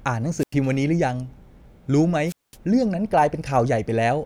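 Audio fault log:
0.38–0.54 s and 2.26–2.56 s, wireless microphone squelch dropout: the radio link fades, hiss swells, then the receiver's squelch mutes the output for about 92 ms and 210 ms. On a spectrogram, broadband noise rises just before each gap. On the waveform, each gap is a flat, near-silent stretch.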